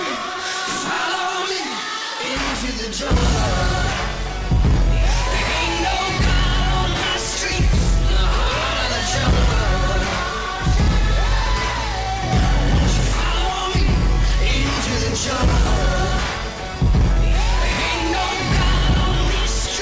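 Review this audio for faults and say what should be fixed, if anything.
No faults can be heard anywhere in this audio, so there is nothing that needs fixing. It can be left as it is.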